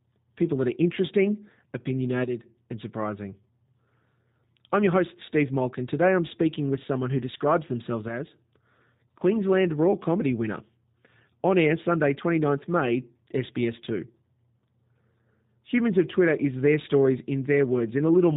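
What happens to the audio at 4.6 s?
G.729 codec coloration is present at 4.6 s, as it is across the whole clip rather than at a single event. The speech has been rebuilt from a vocal tract model, a pitch predictor and a sparse set of pulses per short frame, with nothing above 4 kHz surviving. The result is plainly audible here: muffled, slightly buzzy and synthetic-sounding speech, consistent with a low-rate codec around 8 kbit/s.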